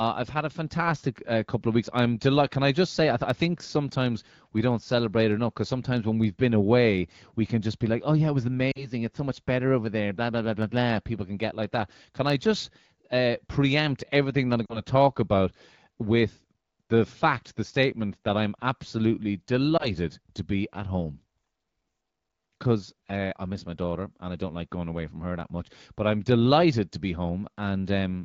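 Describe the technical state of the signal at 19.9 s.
A lost AMR speech frame sits across 19.77 to 19.91 s, between "statement that I'm absolutely" and "to be at home". Radio errors corrupted a single 20 ms frame, which failed its checksum. The AMR-WB decoder concealed the gap by repeating the last good pitch and vocal tract settings at reduced gain. What you hear is a brief dip or warble, and the speech then returns weak or rough for a moment before recovering.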